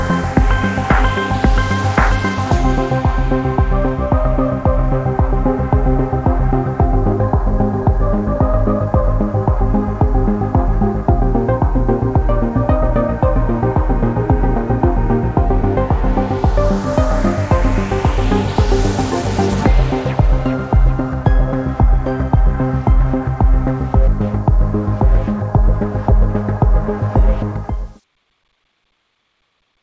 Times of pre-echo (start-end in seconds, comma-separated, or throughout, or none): none